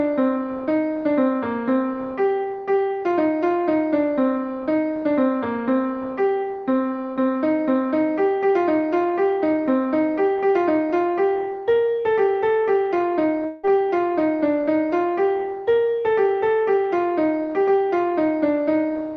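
From 13.45 to 13.65 s the sound smears into a buzzy, fading continuation of itself for about 0.18 s, then resumes with roughly that much audio skipped. This is likely a long network dropout, where the receiver padded the gap instead of playing what was lost.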